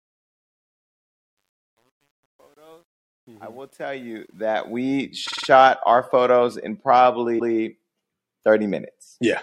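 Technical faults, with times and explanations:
0.00 to 5.02 s, truncation distortion on a fade: the fade-in's quiet start sounds gritty, roughest up to about 3.81 s. The low levels fall onto too few steps without dither, which fits roughly 10-bit resolution.
5.27 to 5.47 s and 7.38 to 7.54 s, repeated frames: a stutter where audio replays. First, a 52 ms chunk loops four more times, adding 209 ms, which fits a couple of frames. Later, a 157 ms chunk plays once more.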